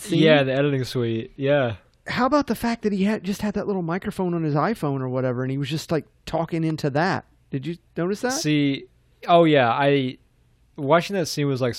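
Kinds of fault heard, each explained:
Electrical switching spike: a sharp snap sits on top of the speech at about 6.7 s, right after "was just like talking", and lasts only around 5 ms. It is a brief impulse added to the signal, not a dropout or a change in the speech itself. The likely cause is a nearby switch, motor or static discharge arcing, with the audio line picking up that burst of electrical energy as a click.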